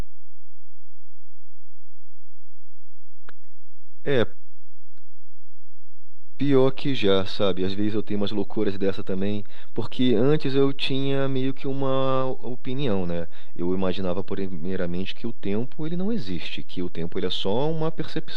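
Throughout the speech, a DC offset of about −17 dBFS shifts the waveform off zero; it's inaudible but eats headroom and adds steady energy at 0 Hz.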